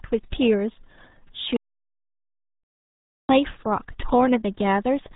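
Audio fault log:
Throughout: RealAudio 14.4 codec. The speech is heavily mangled, muffled and gargly, with nothing getting through above about 3.8 kHz. That narrow band and the thick gargly smearing point to an 8 kbit/s dial-up-era speech codec squeezing everything down.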